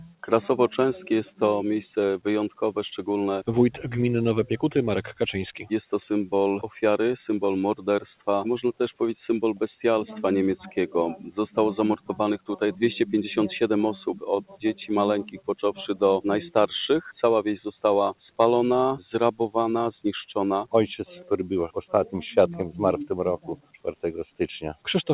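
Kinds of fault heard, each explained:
Noise suppressor applied to music or sounds: Throughout the clip, a suppressor tuned for speech treats sustained and ambient parts of the sound as noise. Level swings by around 10 dB as held portions and tails sink while attacks pass, giving a pumping, unsteady texture.
Sound cut by the noise suppressor: At 0.0–0.26, 11.97–12.13, 12.38–12.54, 14.41–14.6, 15.24–15.51, 21.14–21.33 and 23.38–24.04 s, the suppressor mistakes the sound for noise and pulls it down by about 20 dB, or about 11 dB at 21.14 s.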